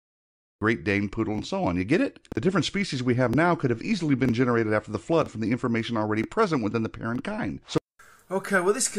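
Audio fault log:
0.00–0.61 s, cut-off start: dead digital silence, then at 0.61 s the sound bursts in at full level mid-event, with no attack or fade-in. The capture began late, so the opening of that sound was never recorded.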